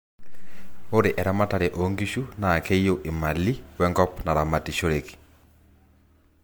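Across the whole speech recording there is a swirly, hollow smearing with softened consonant attacks, the signature of generation loss. The sound most likely went through MP3 coding about four times, each pass re-quantising on a shifted frame grid so noise and spectral gaps pile up. What separates it from a single low-bitrate encode is that the damage is worse than a rate near 100 kbit/s would give, even though content reaches 20.1 kHz.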